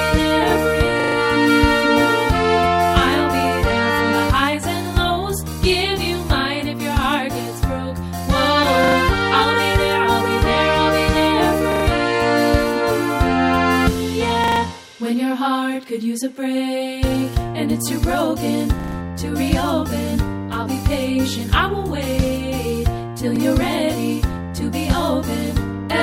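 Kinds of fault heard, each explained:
Repeated buffer: audio failed to reach the output in time, so the device replayed its last block, which fits a 40 ms buffer. A short slice stutters with hard joins at 1.0, 8.84, 11.72, 14.44 and 18.8 s, and once at 23.36 s.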